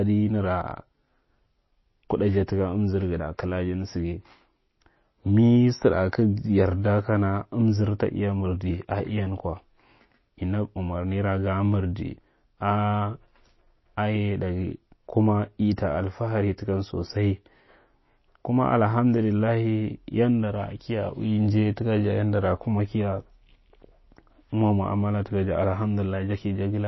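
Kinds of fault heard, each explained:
MP3 compression: The speech has nothing above 5.8 kHz, a flat treble cut, and the coding damage is plainly audible throughout. That's likely an MP3 encoder starved of bits, consistent with roughly 24 kbps, dropping the top end and weaker detail to cope.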